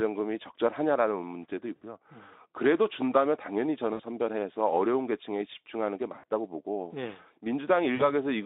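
Around 1.76 to 1.82 s, 3.93 to 4.02 s, 6.19 to 6.24 s and 7.95 to 8.13 s you get VoIP packet loss concealed by the speech codec, with about 60, 60, 40 and 40 ms of audio missing. The decoder keeps repeating its last pitch and filter with falling gain, so the speech smears into a short buzzy tone or coloured noise that fades, and stays a bit weak for a moment after it recovers. The narrowband Speex line carrying it sounds light.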